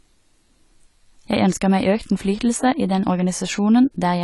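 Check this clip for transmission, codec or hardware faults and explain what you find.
One codec fault runs through the whole clip. The speech has nothing above 11.5 kHz and sounds dull and smeared, with a fizzy, warbling edge on sibilants. That's likely AAC compression, with the top trimmed and bands thinned, which fits a low bitrate around 32 kbps.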